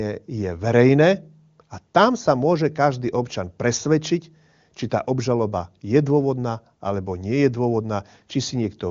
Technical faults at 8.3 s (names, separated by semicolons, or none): none